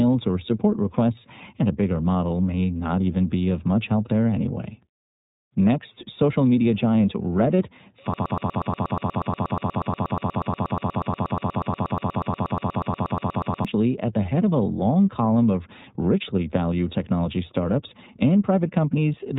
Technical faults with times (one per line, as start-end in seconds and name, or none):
0.00-19.38 iLBC codec
8.14-13.65 broken-record loop